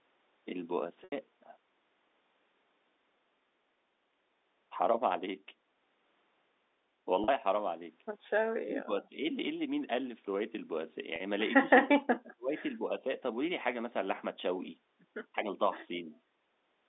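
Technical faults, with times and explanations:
1.04 s, 7.24 s and 11.16 s, packet loss with pitch repetition: the gaps last 80 ms at 1.04 s and 40 ms at the other two, which fits 20 ms packets going missing. The receiver filled each hole by looping the last pitch period, so the sound briefly hangs on a steady, slightly buzzy tone before carrying on. That held, repeated tone is what separates it from the dips below, where the sound gets quieter instead of frozen.
8.6–9.21 s, 11.65–12.51 s, 12.82–12.92 s and 15.36–15.49 s, speech suppressed in double talk: the talker's level drops sharply in the first two spans, by roughly 30 dB and then 40 dB. The last two spans show only brief dips of a few dB. The likely cause is the far side talking at the same time, so the echo canceller could not tell this voice from loudspeaker echo and turned it down. Unlike the packet-loss repairs, nothing is repeated, and the speech keeps moving while its level sinks.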